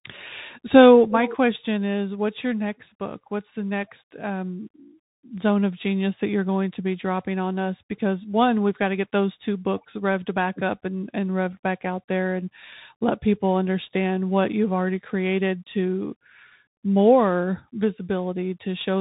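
A Bluetooth CVSD headset codec carries this speech throughout, removing everything above 3.8 kHz and adding plainly audible scratchy sibilants and granular hiss.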